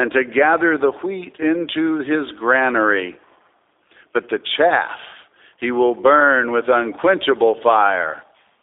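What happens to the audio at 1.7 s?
At 1.7 s the speech carries G.729 codec damage, present through the whole clip. The sound is rebuilt from a vocal tract model, a pitch predictor and sparse pulses. It is confined to 300 Hz to 3.6 kHz, and is audibly rough and synthetic, which fits an 8 kbit/s codec.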